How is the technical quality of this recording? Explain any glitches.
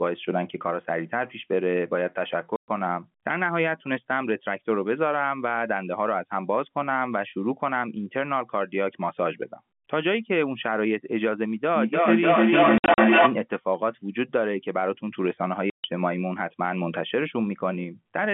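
Not great: there are dropouts in three places and a feedback echo late in the clip, all on top of a telephone-band line that cuts off around 3.4 kHz.

The packet loss filled with silence comes at 2.56–2.68 s, 12.78–12.98 s and 15.70–15.84 s. Chunks of audio never arrived, and the receiver just played nothing in their place. That gives 120 ms gaps in the first two and 140 ms in the third, which fits 20 ms packets. The middle one is scattered over 200 ms, with the longest hole about 60 ms. The edges are hard cuts.

The feedback echo between two devices runs from 11.75 to 13.43 s. Two devices in the same room are on the call, and each one's microphone picks up what the other is playing. Each device's echo canceller only removes its own output, so the sound keeps looping round. You hear it come back roughly every 300 ms, thinner and ringier each pass. Here the loop peaks about 8 dB above the speech, so the repeats build up instead of fading.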